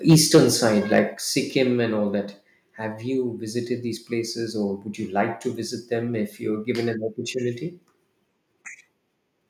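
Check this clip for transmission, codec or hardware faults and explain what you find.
Two hardware-side faults stand out: microphone overload at the very start and again just before the one-second mark, each accompanied by a stepped reduction in microphone volume.

Microphone overload runs from 0.09 to 0.4 s, about 6 dB over full scale with a sizeable share of the waveform flattened, and again from 0.94 to 0.99 s, about 4 dB over with only a small fraction clipped. The likely cause is input gain set too high, so loud peaks exceed the converter's ceiling and their tops are sheared off. The result is a harsh, crackling edge on the loudest moments. Unlike codec distortion, it tracks level and vanishes on quieter passages.

The microphone volume is stepped down at 0.13 s by about 3 dB and again at 1.14 s by about 4 dB. Both the sound and its background fall together in a single abrupt step, with no gradual ramp. 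That sets it apart from an automatic gain control or noise gate, which glide or pump. Each drop follows a distorted stretch, likely the call software reacting to the overload by lowering the device's input level.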